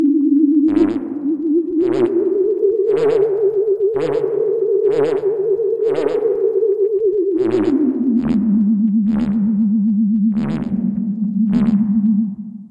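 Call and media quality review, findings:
No faults found in playback.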